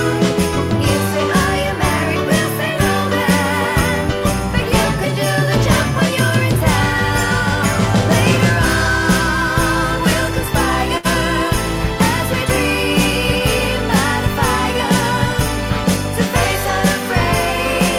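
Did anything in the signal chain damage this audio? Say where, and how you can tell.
Yes, at the network stage. A burst of packet loss hits at 10.97 to 11.06 s. The receiver covered about 69 ms by extending the last sound and fading it down. Then the audio resumes 60 ms further on, and the part in between is gone.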